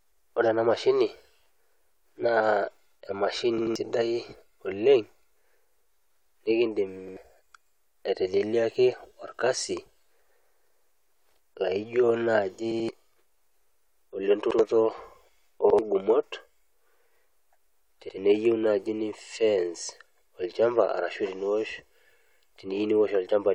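Repeated buffers stutter the speech at 3.58 s and 12.72 s, after "laijo naaji", each chunk of about 85 ms played three times, and at 7.08, 14.51, 15.70 and 18.09 s, before "naaji nifence", played twice. Audio arrived late, so the device replayed its last block, which fits a 4096-sample buffer.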